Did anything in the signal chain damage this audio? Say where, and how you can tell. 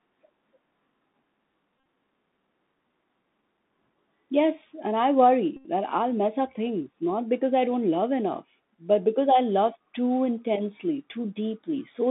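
Yes. The damage is at the codec stage, across the whole clip. This is the Bluetooth CVSD headset codec. The sound sits in a narrow line band of about 200 Hz to 3.7 kHz. Nothing higher gets through. The damage is plainly audible. A granular hiss lies under the speech, and s sounds are scratchy. CVSD codes one bit per sample, up or down, with an adaptive step. The 64 kbps rate points to that one-bit stream.

The second fault is a Bluetooth headset packet repeated, on the radio link. It happens twice. From 1.77 to 1.86 s, about 64 ms of audio is lost, scattered over 83 ms. The longest run is roughly 30 ms. From 5.57 to 5.65 s, 82.5 ms is lost, between "and I" and "that I'll mess up". Lost packets were replaced by re-decoding the last good one. A repeat every 3.75 ms gives a buzz near 267 Hz. The gaps fit about 17 and 22 lost packets.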